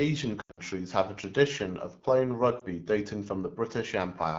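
Throughout the clip, the AMR wideband (HD Voice) codec runs at one of its lowest modes, and the plainly audible damage fits the 8.85 kbit/s rate. At that rate the pulse-driven vocal tract model can't follow the speech closely enough, and the band above 6.4 kHz is only shaped noise, so the speech sounds rough and raspy.

From 0.41 to 0.60 s, just before "have a tradition of", lost AMR speech frames break the decoder's input. Radio errors leave most of a 160 ms stretch without good frames, about 140 ms in total, which points to roughly seven frames. The longest unbroken loss is 80 ms. The decoder keeps replaying the last good pitch and vocal tract settings at falling gain, so the speech smears, warbles and sinks toward silence, then returns thin and rough. At 2.59 s, right after "a tradition of playing", a single 20 ms frame is lost and makes a brief dip.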